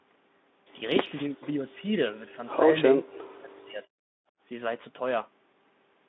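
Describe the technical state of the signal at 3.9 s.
An echo canceller likely mistook double talk for loudspeaker echo and suppressed the speech from 2.94 to 3.91 s; at 3.9 s the speech is still inside that span, where the level dips by as much as roughly 40 dB.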